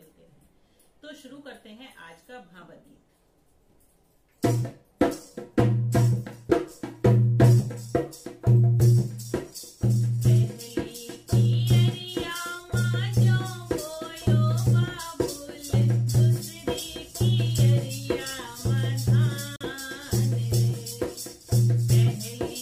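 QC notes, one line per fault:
19.56–19.65 s: digital broadcast dropout. The sound fades out in about 3 ms and goes silent, then resumes later in the programme. The gap is brief, with about 43 ms of material missing, which fits a single lost frame. The receiver stopped trusting the incoming data, either because the signal dropped or a frame failed its checksum. It muted rather than play corrupt data. Whatever was sent during that hole is gone, not delayed.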